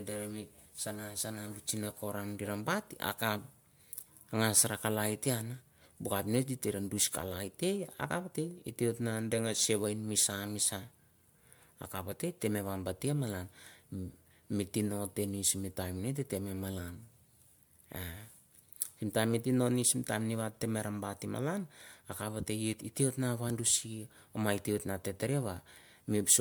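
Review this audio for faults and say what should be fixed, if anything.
Generation loss runs throughout the speech, with a swirly, smeared, hollow quality and softened consonant attacks that sound worse than a single MP3 encode near 140 kbit/s should. The likely cause is repeated lossy re-encoding, roughly five passes, each quantising on a shifted frame grid so noise and spectral holes pile up, while the band still reaches about 20.1 kHz. To prevent it, edit from a lossless master and encode to MP3 only once at the end.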